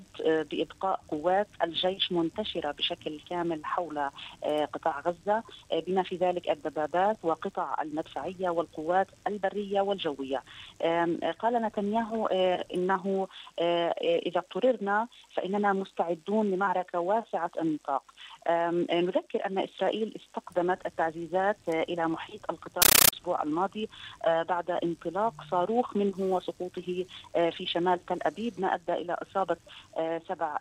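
From 22.82 to 23.13 s the audio gives way to harsh, chattering static: a compressed stream played as audio. Undecoded data bursts of about 13.3 ms repeat 31.25 times a second with silence between them, which fits a 640 kbps AC-3 stream sent as plain samples.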